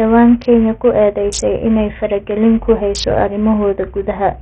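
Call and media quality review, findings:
Speech, throughout. Treble flickers and drops out, nothing above 10.9 kHz. Gritty noise and aliasing ride on the voice. Likely Bluetooth SBC compression. Small bit pool starves the top sub-bands and coarsely quantises the rest. Heavy damage, which fits roughly 48 kbps.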